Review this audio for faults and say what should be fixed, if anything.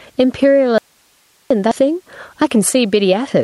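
Gain pumping runs through the whole speech clip. The gain swings by about 15 dB, squashing loud and soft parts closer in level. The likely cause is input gain set far too high, with a fast limiter clamping every peak. Lower the microphone gain and use gentler, slower compression.

An audio dropout to a faint residue runs from 0.78 to 1.51 s. The speech cuts off abruptly and returns just as abruptly. Only hiss, about 40 dB below the speech, fills the gap. This is likely a lost signal feeding a path that stayed live. Check the microphone cable, connector and wireless link.

A skip ahead hits at 1.71 to 1.73 s. Playback jumps forward with no filler, and roughly 0.4 s of speech is gone. The two sides are butted straight together. Audio was discarded while later audio was already queued. Fix the network loss and size the jitter buffer to avoid overflow.

A jitter buffer speed-up runs from 1.82 to 3.28 s. 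The speech plays at 111% speed but keeps its pitch, so it sounds hurried. The receiver trimmed short pitch-period slices repeatedly, removing around 150 ms to cut excess delay. Stabilise packet timing so the buffer stops overfilling.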